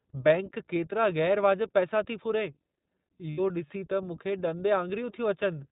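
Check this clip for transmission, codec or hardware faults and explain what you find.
Two faults are present: the whole speech clip has passed through a narrowband codec, and there is one short dropout concealed by that codec's decoder.

iLBC codec, throughout: The sound is band-limited with nothing above 4 kHz, and the codec damage is plainly audible. The voice stays clear but has a rough, slightly synthetic grain. iLBC codes each frame's excitation independently of the frame before, and the character here fits its 15.2 kbps mode with 20 ms frames. The coarse excitation modelling produces that rough texture, and the telephone-band ceiling strips the airiness from consonants.

Lost iLBC frames, 3.30 to 3.40 s: Packets went missing for about 80 ms, which fits four lost 20 ms frames. The decoder filled the hole by repeating the last pitch cycle blended with noise, so the gap comes across as a briefly held, faintly buzzy and breathy vowel rather than silence. 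Because each iLBC frame decodes on its own, the voice snaps back to normal almost immediately once packets resume.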